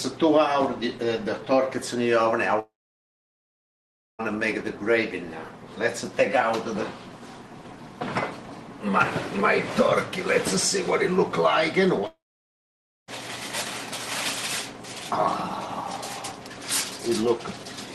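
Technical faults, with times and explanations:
2.59–4.21 s and 12.07–13.10 s, long network dropout: The sound breaks off twice. Each time a short buzzy continuation of the last sound fades within about a tenth of a second. Silence follows, about 1.5 s the first time and 0.9 s the second. The audio then resumes further on. About 1.6 s and 1.0 s of material are gone. The likely cause is packets that stopped arriving. The receiver briefly concealed the gap by extending the last sound, then gave up.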